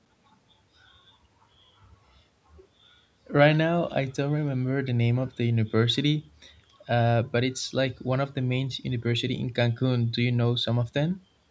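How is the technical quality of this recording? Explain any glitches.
The speech shows no technical faults, and its band reaching no higher than 8 kHz with the deepest bass trimmed is simply the normal result of a call's microphone processing.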